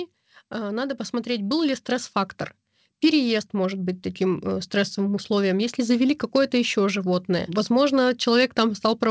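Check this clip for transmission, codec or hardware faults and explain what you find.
One fault turns up, an automatic gain rising between 0.49 and 2.18 s. The gain control judged the input too quiet and lifted its gain by about 6 dB over that stretch, so the speech and the background noise behind it swell upward together rather than the voice alone getting louder. The band stops at 8 kHz, consistent with G.722 at 64 kbps on the call path.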